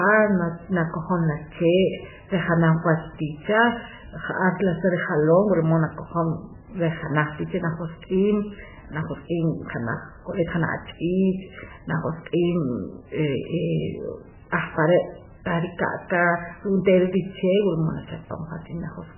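Speech throughout sounds dull and watery, with nothing above 3 kHz and swirling, chirpy sibilants, likely heavy MP3 compression at a very low rate, around 8 kbps.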